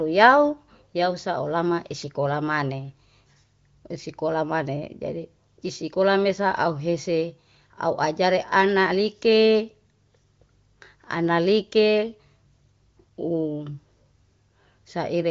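No technical faults can be heard in the speech, which carries the band-limited sound of the AMR wideband (HD Voice) codec at 23.05 kbit/s, with nothing above about 7.1 kHz.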